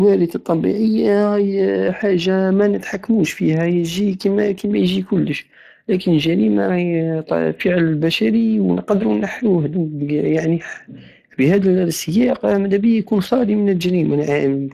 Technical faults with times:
0.00-14.74 Speex codec

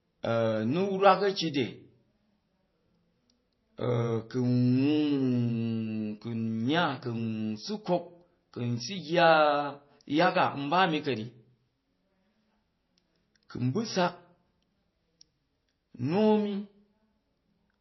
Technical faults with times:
0.00-17.80 low-bitrate audio saved at a high bitrate

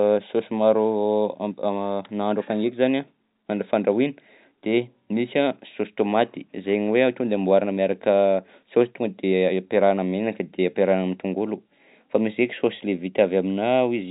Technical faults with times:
none

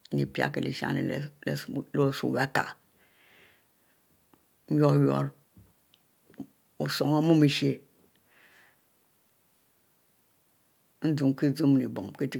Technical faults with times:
none

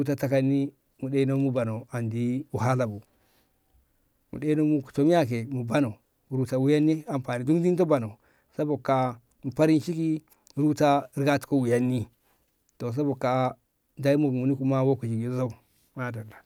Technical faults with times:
none

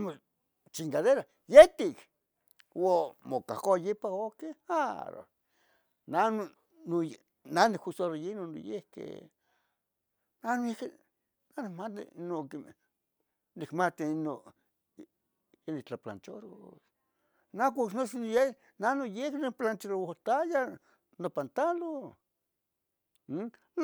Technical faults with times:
none

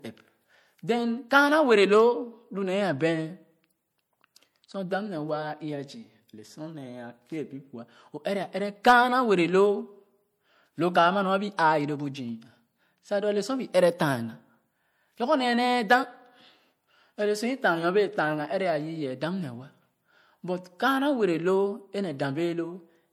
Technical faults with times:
0.00-23.13 MP3 compression

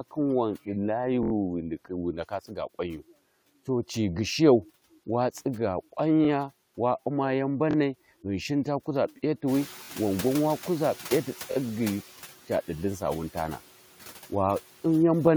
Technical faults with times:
0.00-15.36 noise suppressor artifacts
1.23-1.32 repeated buffer
2.48-2.75 speech cut by the noise suppressor
6.25-6.27 repeated buffer
7.71-7.76 repeated buffer
9.47-12.03 noise suppressor catching up
9.85-9.89 repeated buffer
11.52-11.56 repeated buffer

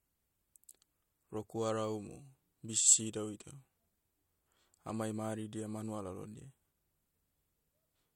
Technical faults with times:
none

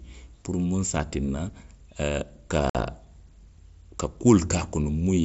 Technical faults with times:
2.70-2.75 unconcealed Bluetooth headset packet loss

